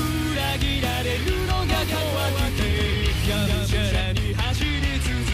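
From 1.69 s to 4.01 s the audio plays twice, a doubled audio track. A second copy trails the first by roughly a fifth of a second. It sits a few decibels below the original. It carries the full frequency range, with no decay and no room colour. It cuts in and out abruptly at those times. The likely cause is the same signal reaching the mix a second time through a slower path.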